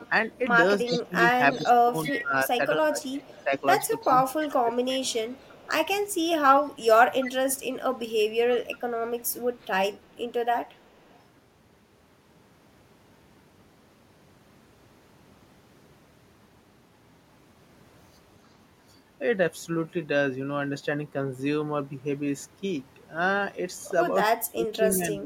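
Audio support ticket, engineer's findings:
Echo leak, 0.0–2.22 s, 3.04–4.47 s, 5.05–5.7 s, 7.23–7.3 s, 8.51–11.18 s. Delayed copy of the speech 343 ms behind, about 10–30 dB down. Likely far-end echo canceller residual. Spectrogram shows ghost harmonics repeated 343 ms later.

Speech suppressed in double talk, 0.87–3.53 s, 4.08–5.0 s, 24.36–25.25 s. Talker dips in chunks by roughly 15 dB, roughly 30 dB in the last. Likely echo suppressor attenuating during overlap. Waveform shows gated notches.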